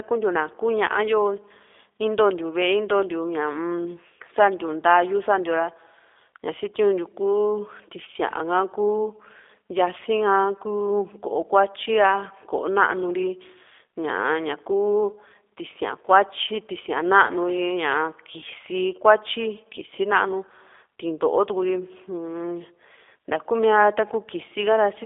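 Speech passed through a G.729 codec for the whole clip. The coder rebuilds each 10 ms frame from a vocal tract filter, a pitch predictor and a few sparse pulses, at a rate that fits 8 kbit/s. The band is limited to about 300 Hz to 3.6 kHz, so the sound is thin and boxy. The damage is plainly audible: the speech is rough and somewhat synthetic.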